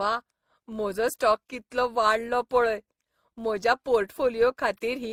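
Across the whole speech clip, coding artefacts of two distinct characters sit on top of each other. This is likely transcoding between lossy codecs: the layering points to an MP3 encode near 64 kbit/s later re-encoded as Opus near 32 kbit/s.

Throughout, there is also a steady 93.8 Hz buzz that rises and falls with the speech level. This is a filter restarted on every block, which fits a 512-sample buffer. Each block begins from reset state, producing a small repeating transient.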